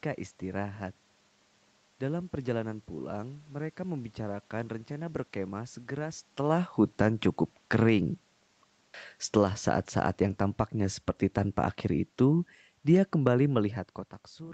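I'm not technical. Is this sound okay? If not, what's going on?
No. This has automatic gain falling: the call's automatic volume control judged the input too loud or too noisy and turned it down, briefly from 9.22 to 9.55 s, then gradually from 10.09 to 14.07 s, so the speech and the room noise behind it sink together.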